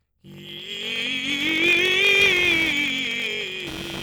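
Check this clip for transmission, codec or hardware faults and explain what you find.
Two faults are audible in this music clip: a padding buzz that runs the whole way through, and computer activity noise that joins it in the second half.

Block size mismatch (padded), throughout: the stage reading the audio takes blocks of 1024 samples, but the stage feeding it supplies fewer, about 882, and the shortfall in each block is filled with zeros. Those silent slivers repeat at 46.9 Hz, which fits a 1024-sample read at 48 kHz, and give a steady low buzz. The music is stretched to 0.861 times its normal speed, dragging while keeping roughly its usual pitch.

Computer activity noise, from 2.19 s to the end: changing processor, graphics or mouse load disturbs the ground shared with the audio circuit, injecting interference unrelated to the music. Here it is a buzzy, pulsing rasp repeating around 200 times a second, sitting roughly 15 dB below the music. 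It starts mid-clip and stays until the end, layered over the lower padding buzz.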